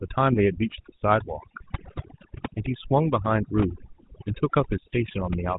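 Throughout, an overdone noise removal stage pushes frequency bands near its noise estimate far down or off, leaving near-silent, twinkling gaps in the background. The whole clip also passes through the GSM full-rate codec, whose coarse pulse-driven excitation and 4 kHz ceiling give plainly audible buzzy, gravelly roughness, which fits a 13 kbps GSM link. From 0.32 to 0.40 s, and again from 4.28 to 4.36 s, GSM bit errors corrupt the decoder's filter, pitch and gain values for a few frames, so the speech breaks into squawks, pops and gargling.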